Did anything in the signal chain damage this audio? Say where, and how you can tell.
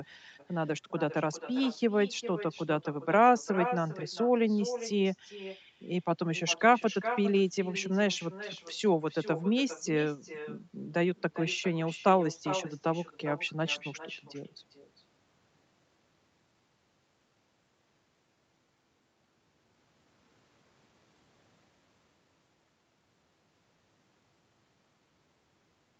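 Yes. Throughout the clip, every phrase of speech is followed by a fainter, hollower copy of itself, roughly four tenths of a second later and about 12 dB below the direct sound. This is echo with no canceller, a fault in the call processing: the far end played the call over a loudspeaker, its microphone picked that up, and nothing removed it before it travelled back across the network. The band stopping near 8 kHz is simply the call codec's normal limit.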